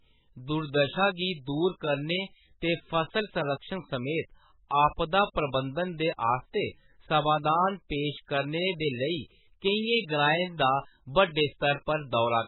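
Throughout, the speech stops dead at 4 kHz and sounds watery and swirly. This is likely heavy MP3 compression at a very low bitrate, near 10 kbps.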